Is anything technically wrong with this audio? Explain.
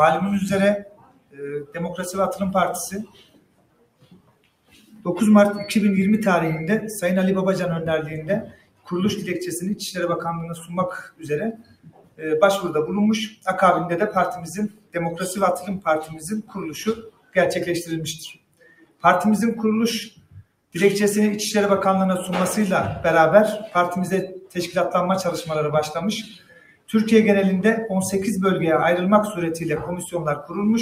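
Yes. A noise suppressor built for speech has been applied to this sound throughout. It treats steady tones and decaying tails as noise, so held parts and ambience get pushed down while attacks come through. Level swings by roughly 20 dB, giving a pumping, thinned-out feel.

The clearest cases of sound cut by the noise suppressor come at 0.78–5.06 s, 8.41–8.92 s, 10.52–20.75 s, 24.38–24.57 s, 26.23–26.94 s and 30.06–30.81 s. Sustained material sinks by about 15 to 20 dB there, and tails get chopped short.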